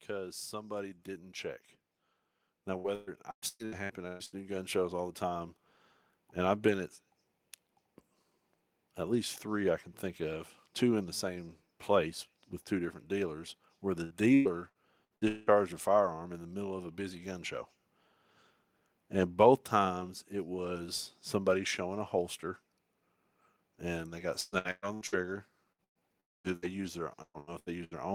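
It's a speech clip. Over the first 5 seconds, up to "the time", automatic gain rising lifts the voice and background together by about 12 dB as the control ramps up its gain. Repeated packet loss gives choppy, robotic stretches with bits missing at 2.77–4.35 s, 14.04–15.50 s (between "different dealers where the" and "a firearm in the"), 24.41–25.15 s after "and they got", and 27.22–27.94 s. Each hole gets patched by stretching the last sound. There's a burst of packet loss at 25.72, 25.84–26.01 and 26.56 s, where the last sound is briefly held and faded before the audio jumps ahead. At 26.20–26.47 s the sound cuts to near silence for about a quarter second, likely a long network dropout.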